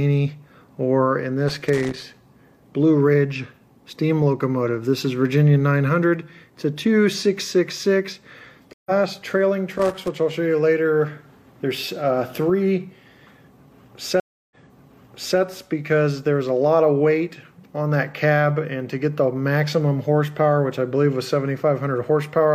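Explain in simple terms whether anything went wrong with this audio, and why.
Two kinds of fault can be heard.

Loose connector crackle appears from 1.48 to 2.19 s and again from 9.71 to 10.08 s. A worn or dirty contact keeps touching and losing touch, so the sound is chopped into an uneven burst of scratching. Unlike a network glitch, the sound is not cleanly cut to silence and nothing is skipped or repeated. It is rough noise laid over the audio while the contact shifts.

Stream reconnect happens at 8.73 s and again at 14.2 s. The connection dropped, the player went quiet and then picked the stream back up from scratch. At 8.73 s the gap lasts 125 ms, and the sound resumes a fraction of a second further on, so a short piece is missing. At 14.2 s the silence is 308 ms, and playback restarts 882 ms earlier, so almost a second of sound is heard twice. A crackle never skips ahead or repeats like this.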